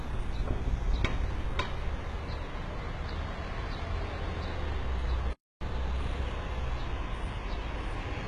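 Throughout, the sound is gritty and metallic in the treble, with nothing above 11.8 kHz. This is likely HE-AAC compression at a very low bitrate, around 16 kbps. Its upper band is rebuilt from copied lower bands, so it doesn't match the original. From 5.33 to 5.61 s, the audio cuts out for about 0.28 s, then resumes. A playback stall is the likely cause: the player briefly ran out of data.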